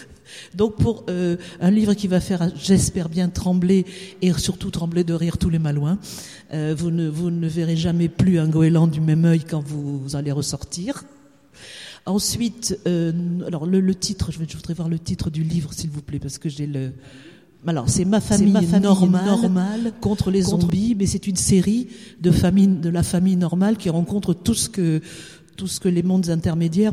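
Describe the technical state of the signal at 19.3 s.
At 19.3 s a doubled audio track runs from 18.32 to 20.70 s: a second, equally loud copy trails about 0.4 s behind, likely from a slower capture path, showing as abruptly starting repeated onsets on the waveform and spectrogram.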